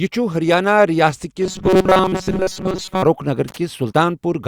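From 1.42 to 3.03 s the speech collapses into a stiff, metallic buzz pitched at 188 Hz. That's robotic sound from repeated short buffers. The likely cause is audio arriving too slowly, so the playback side keeps looping the last little chunk instead of going silent. A 188 Hz buzz means each repeat lasts about 5.3 ms, which fits a very short buffer, and most of that stretch is recycled material rather than fresh audio. The rough shape of the speech still comes through.

Shortly after, from 3.48 to 3.57 s, there's a quick burst of ragged crackle, which is loose connector crackle. A worn or dirty contact is making and breaking over and over, chopping the signal into a scratchy, irregular spatter for just under a tenth of a second.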